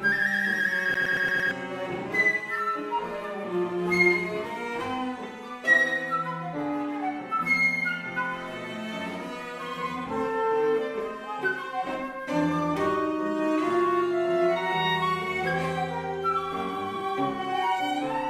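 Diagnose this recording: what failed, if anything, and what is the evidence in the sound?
A playback fault: the CD is stuck on one turn from 0.94 to 1.51 s. A 114 ms segment repeats five times in a fast, even stutter, with a brief mute at each jump as a scratch throws the laser back one track per revolution.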